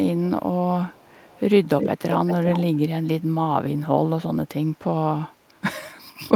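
Echo leak at 0.93–1.4, 1.64–1.9, 2.1–2.79, 4.74–4.78 and 5.32–5.61 s: the speech repeats 373 ms late. It is faint except from 1.64 to 2.79 s, where it comes close to full level. The likely cause is a far-end echo canceller failing to remove loudspeaker pickup. On a spectrogram each harmonic pattern appears duplicated 0.37 s to the right.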